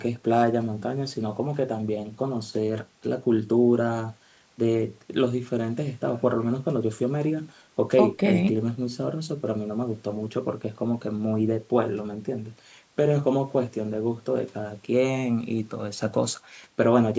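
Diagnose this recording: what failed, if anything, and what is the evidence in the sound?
Nothing has failed: the speech shows only the expected marks of call microphone processing, with content reaching no higher than 8 kHz and the lowest bass taken out by the high-pass filter, both normal for a call path.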